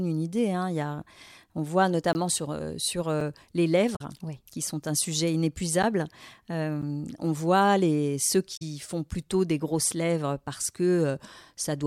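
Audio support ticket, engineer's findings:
Block of digital silence: likely output buffer not filled in time, samples zeroed at 2.13–2.15 s (20 ms), 3.20 s (about 6 ms), 5.83 s and 6.82 s (10 ms each). Hard cuts to zero, so ticks and brief holes in the speech.

Damaged data in a compressed stream: corrupt frames at 3.95–4.01 s and 8.56–8.62 s, decoder losing sync and searching for the next header. Chirp, squawk, click or short hole at each.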